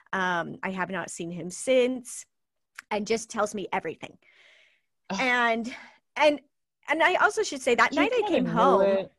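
Just a stretch of speech, and there's nothing technically wrong to point to anywhere in it.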